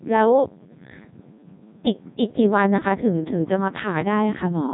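From start to finish the speech passes through a Codec 2 vocoder, and the heavy damage fits a bitrate around 1.2 kbit/s. Only pitch, voicing, energy and a spectral envelope survive, resynthesised from sine waves, so the voice sounds robotic and buzzy, with nothing above 3.8 kHz.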